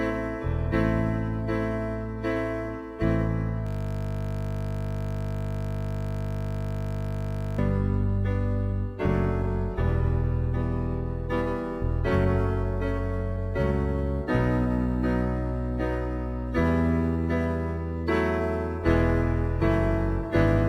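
From 3.67 to 7.58 s a system hang loop repeats one 20 ms slice of the ring buffer, producing a steady 50 Hz buzz while the playback system froze.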